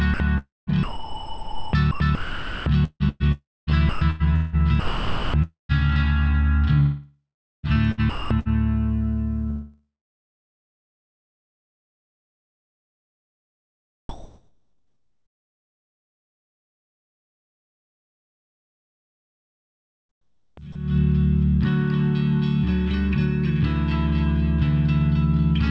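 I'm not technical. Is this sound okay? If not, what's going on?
No. Sound chopped by the voice detector at 0.14–4.56 s, 4.80–5.72 s, 6.80–8.48 s and 14.09–20.75 s. The sound keeps dropping out and a soft artificial hiss fills the gaps, likely because the sender's system misjudged those moments as silence and sent generated comfort noise instead.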